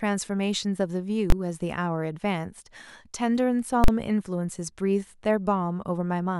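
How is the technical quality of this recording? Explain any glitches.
The recording is marred by two invalid numbers at full scale faults, at 1.30 s (about 21 ms) and 3.84–3.88 s (about 43 ms). Invalid calculation results are pinned to maximum level for a processing block, matching 1024- and 2048-sample blocks. Each sounds like a sharp bang interrupting the speech.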